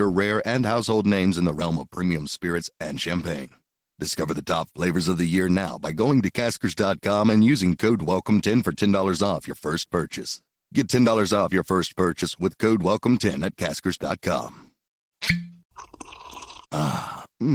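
Opus voice compression runs through the whole of this speech recording. The coded detail suggests a low rate of about 16 kbps in Opus's hybrid mode, where the SILK linear-prediction coder carries the band below 8 kHz and a CELT layer codes the top, in 20 ms frames. The excitation is quantised coarsely, so the damage is plainly audible: the voice turns hoarse and slightly robotic even though the full bandwidth is kept.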